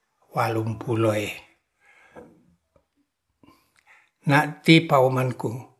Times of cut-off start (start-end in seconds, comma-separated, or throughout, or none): none